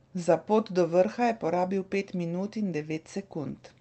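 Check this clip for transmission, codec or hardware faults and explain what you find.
No faults found: the speech comes through a call path whose top end stops near 8 kHz, which fits Opus at 32 kbps, with only that codec's normal coding noise.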